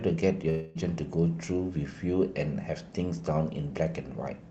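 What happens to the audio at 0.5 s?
At 0.49 to 0.77 s there is a long network dropout, likely caused by a gap where no audio arrived. The receiver stretches the last sound into a buzzy, fading fill lasting about 0.26 s, and the audio resumes at 0.77 s with that stretch of the original missing.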